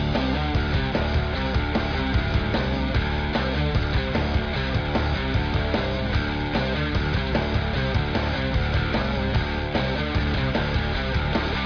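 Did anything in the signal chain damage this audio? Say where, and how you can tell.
No, nothing along the chain seems to have harmed this audio, and there's nothing in it that points to a problem at any stage.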